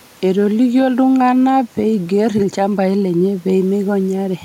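No faults are audible in the speech; the only background is ordinary room noise sitting about 34 dB below the voice, which belongs to the recording space rather than the system.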